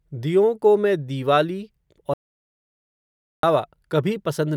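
Speech that cuts abruptly to dead, room-tone-free silence at 2.14 s, just after "दियों को मैं दीवाली", and resumes mid-flow at 3.43 s, losing about 1.3 s: an audio dropout to silence, likely from the input being lost while the recorder kept writing silence.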